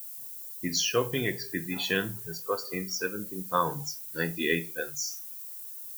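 From start to finish the speech carries low bit depth with noise shaping. The audio seems squeezed to about 7 bits, with the rounding error pushed up the spectrum. You hear a steady, thin hiss climbing toward the top end, only about 10 dB under the speech.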